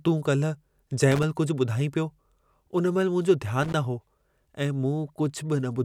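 A worn or dirty contact in the signal path is making and breaking as it shifts, producing loose connector crackle twice in this speech. Each break chops the signal, and any DC on the line turns the interruptions into pops. The first burst runs from 1.11 to 1.23 s, the second from 3.63 to 3.74 s, just before "हो ऐं". Both are short, irregular scratchy crackles that cut across the audio.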